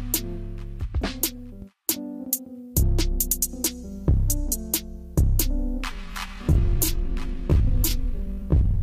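At 5.84 s the pace suddenly drops, and the audio stays slow until the end. Pitch does not fall with it. This is a time-stretched section, running at about 0.65 times the original speed. Software likely lengthened this stretch to fill a set duration, repeating short slices of sound so the pitch held steady. The result drags, as if each moment lingers too long.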